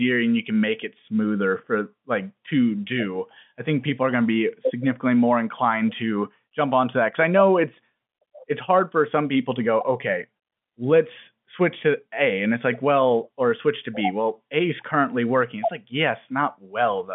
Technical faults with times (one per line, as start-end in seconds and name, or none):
none